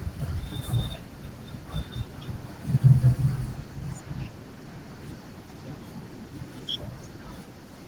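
Throughout the speech, Opus voice compression is plainly audible. The coder appears to run in hybrid mode: linear prediction handles the band below 8 kHz and a transform layer spreads thinly across the rest, up to about 20 kHz. The voice sounds slightly hoarse and robotic because the excitation is coded coarsely, which fits a rate near 16 kbps. Unlike a simple low-pass filter, the top is present, and the voicing itself is roughened.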